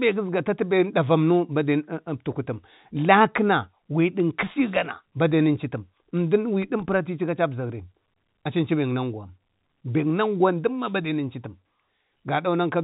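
There are no technical faults to describe in time order; the speech comes across as ordinary telephone-band audio with nothing above about 3.8 kHz.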